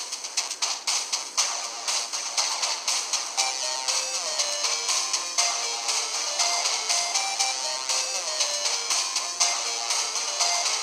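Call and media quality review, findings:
Nothing to flag here, the whole thing sounds steady and problem-free from beginning to end.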